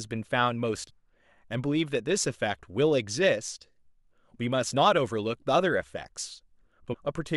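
Damaged data in a compressed stream hits this speech clip at 0.88–0.91 s and again at 6.92–6.95 s: corrupted frames make the decoder lose sync, giving brief glitches.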